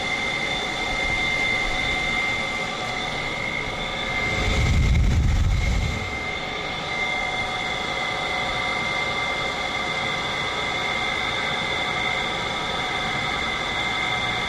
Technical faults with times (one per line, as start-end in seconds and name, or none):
none